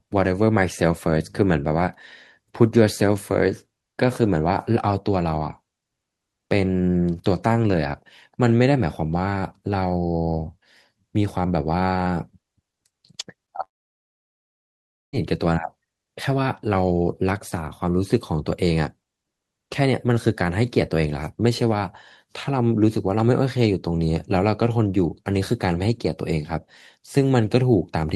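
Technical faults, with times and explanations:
13.63 to 15.16 s, long network dropout: a brief fading buzz smears the last sound, then near-silence lasts about 1.5 s, and speech resumes with that stretch gone, likely from lost packets. The waveform flattens to a thin line, and the spectrogram shows a smeared tail before a blank gap.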